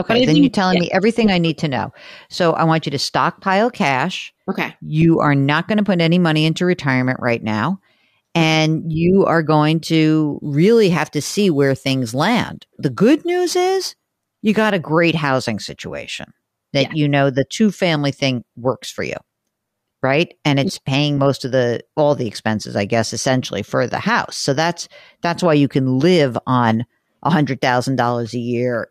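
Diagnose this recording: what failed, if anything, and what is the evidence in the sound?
Crude rate conversion, at the sample-format conversion stage. From 10.43 to 14.70 s, between "you are going to" and "a great housing situation", the speech carries a gritty, inharmonic fizz that tracks the louder and brighter syllables and sits about 30 dB below them. The pattern points to a 44.1 kHz to 48 kHz change done by repeating the nearest sample instead of filtering, so a periodic timing error produces shifted, inharmonic copies of the voice.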